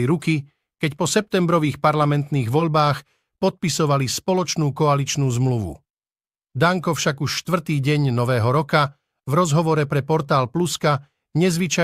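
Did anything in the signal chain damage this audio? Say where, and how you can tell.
No, nothing in the signal chain damaged this speech.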